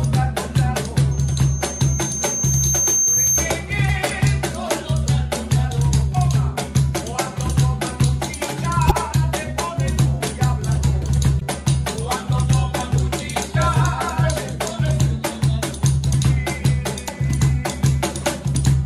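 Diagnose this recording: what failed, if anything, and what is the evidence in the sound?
Loudspeaker feedback squeal in the acoustic loop: from 1.11 to 3.65 s a 6.3 kHz tone swells over about two seconds to about 5 dB above the sound. Unlike a steady interference whine, it grows on its own.

Damaged data in the compressed stream, a codec/storage fault, causes brief glitches at 3.86, 8.87, 11.39 and 17.05 s, each about 40 ms. The decoder loses frame sync and searches for the next frame header.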